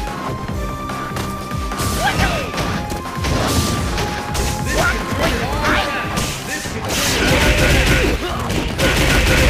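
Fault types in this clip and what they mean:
Processor overload crackle: the processor can't finish its tiny buffers, each well under a millisecond, on time, so dozens in a row repeat stale audio with hard edges, giving gritty crackle from 4.71 to 5.31 s and again from 8.35 to 9.38 s.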